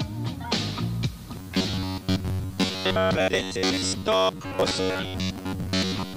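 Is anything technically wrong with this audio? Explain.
Yes. From 1.36 s to the end, there is robotic sound from repeated short buffers. New audio likely arrived too seldom, so the player looped a fragment of about 11 ms for most of that stretch. This imposes a rigid, metallic buzz at 93.8 Hz.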